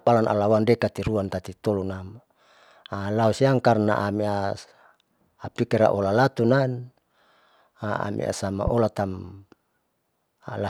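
A loud pop interrupts this speech recording twice, from 1.07 to 1.10 s and from 8.67 to 8.70 s. Each is a single sharp click roughly 10 dB above the surrounding level, and the speech carries on beneath it. The likely cause is a sudden voltage step or spike from a plug, switch, static discharge or driver glitch, which the following circuitry shapes into a brief pulse on top of the signal.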